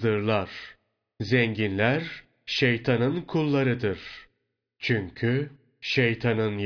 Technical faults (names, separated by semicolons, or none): none